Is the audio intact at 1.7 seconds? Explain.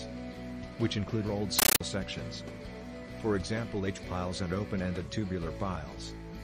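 No. From 1.59 to 1.81 s, loud chattering static bursts about 31 times a second: a compressed stream played as audio, AC-3 data read as samples rather than decoded.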